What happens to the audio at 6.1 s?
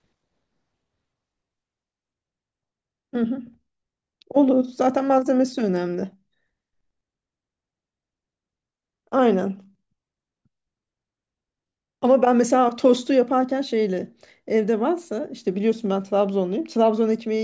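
Nothing goes wrong at 6.1 s: the speech there plays through intact, with no dropout, click, glitch or other fault.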